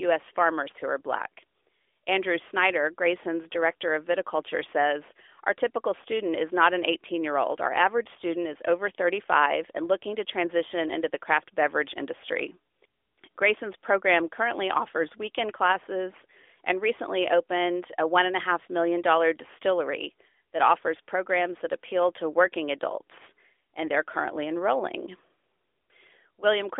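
Nothing stood out on listening to this speech, which carries the narrow, phone-line sound of a mobile call with no content above about 3.6 kHz.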